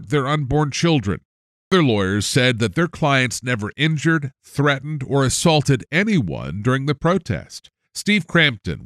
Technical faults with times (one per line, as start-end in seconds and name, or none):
1.54-1.72 clipped start after a pause